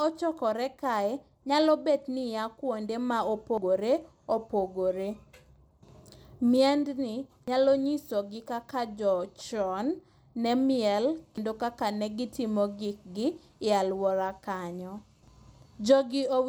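Abrupt skips, each dropping about a tenth of a second, land at 3.58 s just after "kuonde ma", then 7.48 s, 11.38 s just before "kaka ne gitimo gikgi", and 15.28 s. This regular spacing is likely audio missing between chunks, lost as each roughly four-second block hands over.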